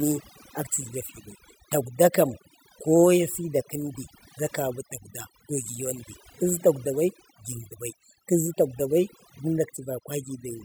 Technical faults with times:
0.00-10.64 overdone noise removal

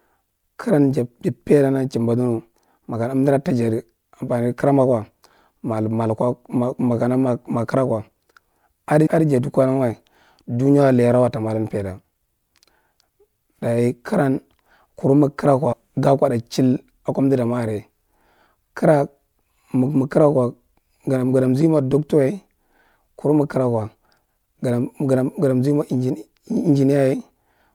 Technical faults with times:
9.05 compressed frames skipped
15.72-15.74 compressed frames skipped

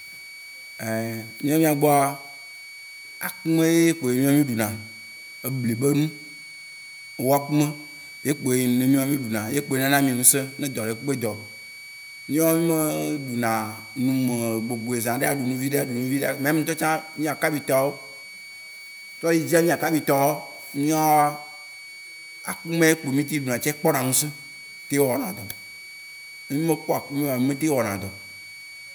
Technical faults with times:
0.00-28.95 switching supply whistle

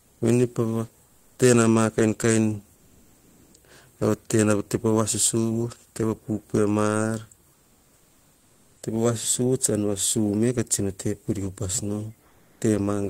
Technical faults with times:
0.00-0.21 comfort noise in place of the background
1.05-1.37 comfort noise in place of the background
2.75-3.53 comfort noise in place of the background
7.53-8.81 comfort noise in place of the background
12.27-12.61 comfort noise in place of the background

